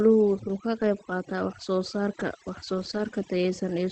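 Across the whole clip the background is pulled down and broken into scattered twinkling specks where it should be. This is overdone noise removal: the suppressor was set so hard that any frequency band sitting close to its noise estimate is pushed right down or switched off, and the quieter parts of the speech are removed along with the noise. The call path's Opus coding also stops the top end at around 8 kHz.

From 0.95 to 0.97 s, between "uu ka qayb" and "qaataa wax soo saarka", there is a brief rough, grainy patch with no gap in the sound. A lost packet was rebuilt from error correction: the next packet carried a low-bitrate copy of the missing 20 ms, and the decoder played that coarser copy in its place. A longer rough, noisier stretch follows from 2.73 to 2.99 s, with about 140 ms of it rebuilt, just after "wax soo saarka wax". The sound keeps going through it, but it turns coarse and grainy, which points to several separate lost packets each replaced by its lower-quality backup copy.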